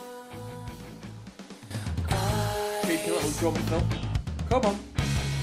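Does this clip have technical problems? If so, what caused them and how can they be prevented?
Yes. At 1.71 s there is a sudden gain jump: the level steps up by about 12 dB from one sample to the next and stays raised until the end. The sound and its background noise rise together, which points to a digital gain change rather than a change at the source, likely a setting applied without any ramp. On a waveform the envelope widens abruptly at that instant; a spectrogram shows every band brightening at once along a sharp vertical edge. Prevent it by smoothing any gain change over tens of milliseconds instead of applying it instantly.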